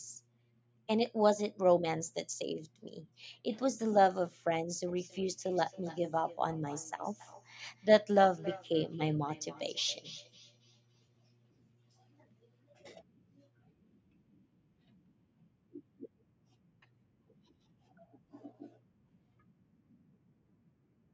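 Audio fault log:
4.88–11.56 s, feedback echo between two devices: a second device in the room replays this mic's audio, so the speech comes back roughly every third of a second, about 19 dB down.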